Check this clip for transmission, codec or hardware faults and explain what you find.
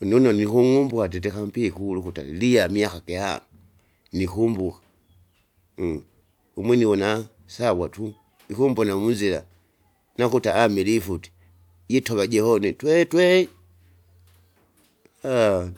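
Nothing stands out on this speech recording; there's no transmission, codec or hardware trouble to report.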